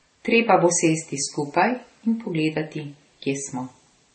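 From start to end the speech carries stacked compression damage, likely transcoding between lossy codecs: low-bitrate MP3-style smearing overlaid with Vorbis-type warbling, which fits an MP3 pass near 32 kbit/s followed by a Vorbis pass near 33 kbit/s. The second encoder wasted its small budget re-coding the first one's artefacts, so both sets are audible together. Nothing remains above 8.4 kHz, leaving sibilants dull and the top end flat.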